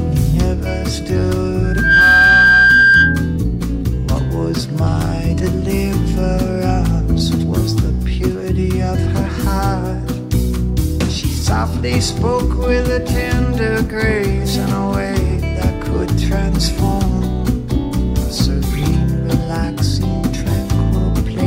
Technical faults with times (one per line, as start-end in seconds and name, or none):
1.63-3.37 loudspeaker feedback squeal